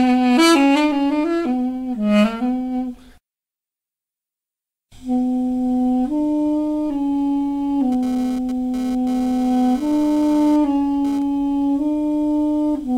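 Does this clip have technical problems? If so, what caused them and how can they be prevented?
Yes. From 7.92 to 11.22 s a GSM phone buzz, about 20 dB below the audio, rasps at 216.7 Hz with dense harmonics. A nearby 2G handset's intermittent data bursts were rectified by the audio circuitry. Keeping phones away from the equipment prevents it.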